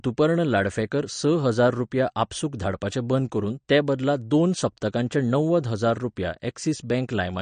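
An MP3 encoder running short of bits is the likely cause of the damage heard across the whole of this speech clip. It has cut everything above 9.1 kHz at a fixed point, and with too few bits for the frame it is switching weak frequency lines on and off from one frame to the next. The sound is dull at the top, with a plainly audible watery swirl and chirpy, metallic s sounds, which fits a bitrate around 40 kbps.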